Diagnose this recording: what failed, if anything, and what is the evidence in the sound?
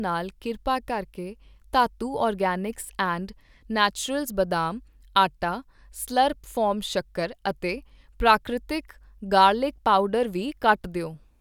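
Nothing in the speech recording stood out on listening as a failure at any stage of the chain.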